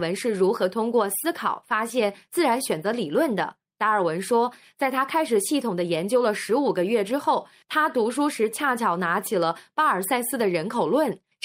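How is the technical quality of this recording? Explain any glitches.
The recording has timing faults throughout: the sending and receiving clocks disagree, and the receiver keeps patching the gap.

Clock drift between sender and receiver runs for the whole clip. The sender's clock is about 1.5 percent slower than the receiver's, so audio arrives slightly too slowly and the receiver's buffer keeps drifting toward empty. The sound isn't broken outright, but the speech never sits on a steady time base, and the flow feels faintly uneven from start to finish.

Repeated timing corrections appear from 0.38 s to 10.88 s. To keep its buffer from running dry, the receiver repeatedly repeats short pieces of the incoming audio, always in the same direction and at uneven intervals, adding about a fifth of a second over that stretch. The speech plays at about 98 percent of its natural pace, with small hiccups and a slightly dragging, unsteady rhythm where the repeated pieces land.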